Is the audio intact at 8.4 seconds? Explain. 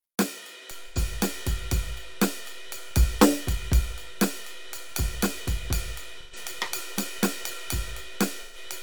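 No. A DC step is present from 0.71 s to the end: the waveform's zero line jumped and stays offset, marked by a low thump at onset while the music continues. AAC frame loss with concealment runs from 8.42 to 8.57 s, about 128 ms, which fits three lost frames. The decoder patched the gap from the last good spectrum, leaving a smeared, phasey stretch.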